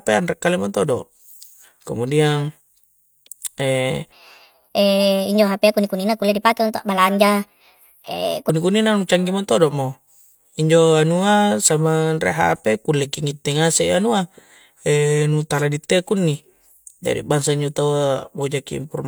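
Speech that abruptly turns high and hurried from 4.12 to 8.49 s, running 1.35 times too fast and lifting pitch by about five semitones, before snapping back to normal. This section at the wrong speed was likely played or resampled against the wrong clock.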